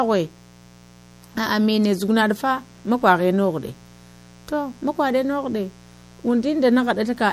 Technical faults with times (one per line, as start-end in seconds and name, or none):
0.00-7.33 mains buzz
0.00-7.33 MP3 compression